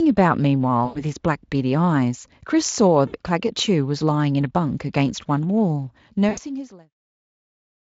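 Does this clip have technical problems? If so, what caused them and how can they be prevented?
Yes. VoIP packet loss concealed by the speech codec: packets went missing at 0.85–1.05 s, 3.07–3.15 s and 6.29–6.39 s. The decoder extrapolated its last pitch and filter at falling gain, smearing the sound into a fading buzz that stays weak briefly afterwards. Forward error correction or redundant packets with an adequate jitter buffer, over a less congested network path, would prevent it.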